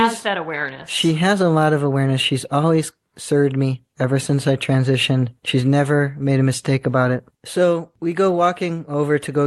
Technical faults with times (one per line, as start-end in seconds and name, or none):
none